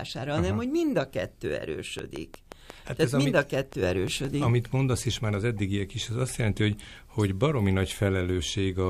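From 1.99 s to 4.44 s, just after "hogy mind a kettő", a train of clicks sits over the speech: around fifteen near-identical pops at a steady 5.75 per second, peaking roughly 10 dB above the speech. This is likely electrical interference or a faltering interface.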